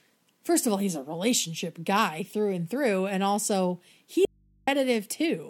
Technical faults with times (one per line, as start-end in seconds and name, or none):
4.25-4.67 audio dropout to a faint residue